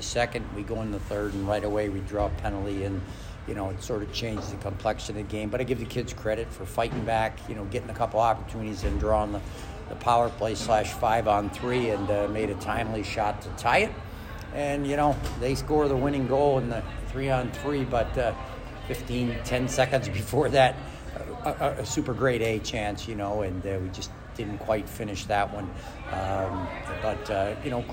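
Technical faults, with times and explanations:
No technical faults are audible anywhere in the audio.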